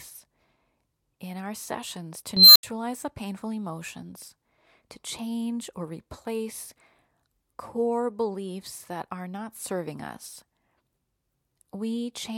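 At 2.37 s the speech is overtaken by an unstable filter. A recursive filter stage has gone unstable, so its output feeds on itself and grows without bound. A piercing whistle near 4 kHz swells over about 190 ms until it clips harshly, then the arithmetic overflows and the output drops to silence for about 77 ms before the filter resets at 2.63 s. Unlike acoustic feedback, which builds and rings more gradually, this squeal rises within a fraction of a second and ends in an abrupt dropout.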